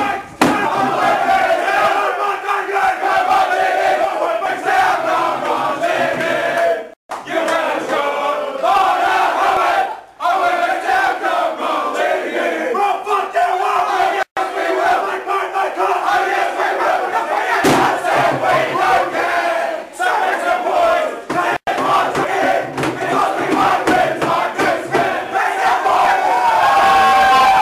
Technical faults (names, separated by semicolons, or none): dropped buffer (overrun)